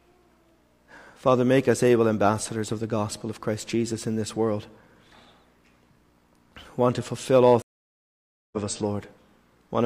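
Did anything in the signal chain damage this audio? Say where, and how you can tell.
Yes, a stream reconnect at the network stage: silence from 7.62 to 8.57 s, then a fresh decoder resumes about a second further on, skipping material a plain dropout wouldn't.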